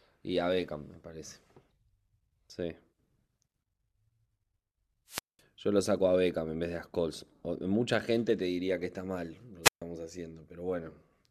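Twice, the analogue FM microphone's radio signal fades until the receiver's squelch mutes it, a wireless microphone squelch dropout. From 5.07 to 5.41 s and from 9.63 to 9.82 s, a brief rise of hiss gives way to near-silent holes of 0.20 s and 0.14 s before the speech returns.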